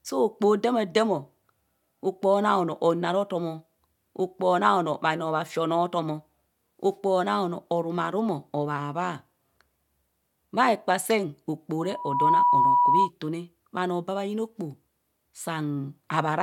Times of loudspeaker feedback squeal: 11.83-13.10

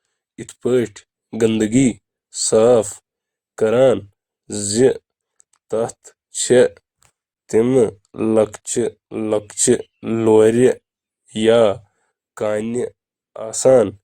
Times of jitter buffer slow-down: none

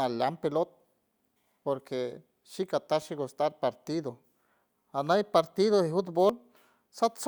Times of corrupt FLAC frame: 3.02

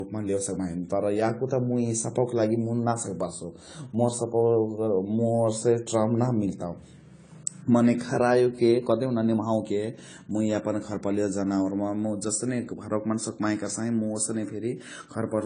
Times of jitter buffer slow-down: none

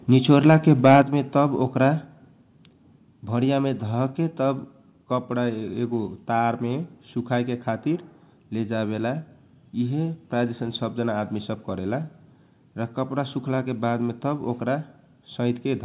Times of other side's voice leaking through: none

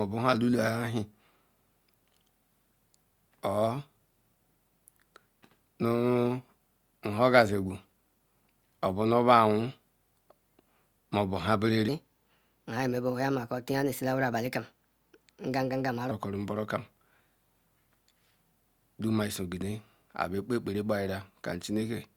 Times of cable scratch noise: none

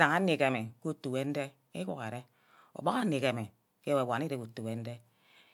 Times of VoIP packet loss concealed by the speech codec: none

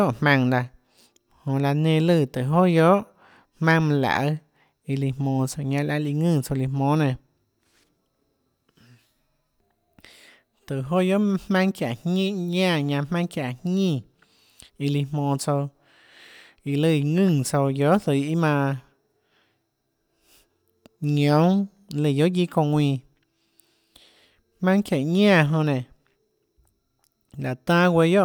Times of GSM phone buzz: none

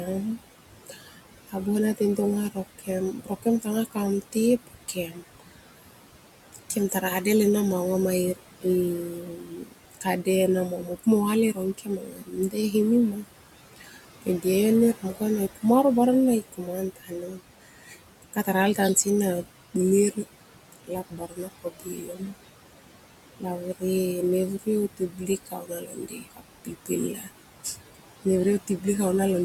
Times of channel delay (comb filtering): none

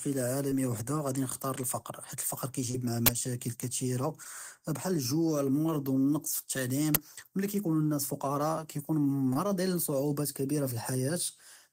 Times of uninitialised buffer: 3.06-3.08, 6.95

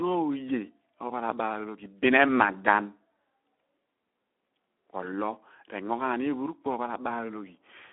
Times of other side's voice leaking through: none

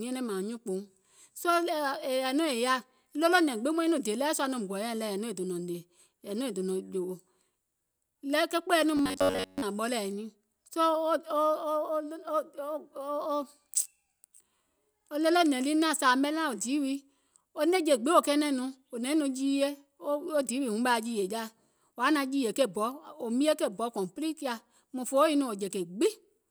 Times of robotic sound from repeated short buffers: 8.97-9.62

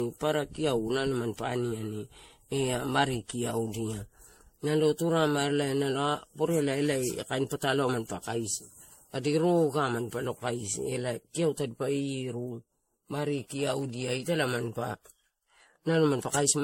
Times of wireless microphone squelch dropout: none

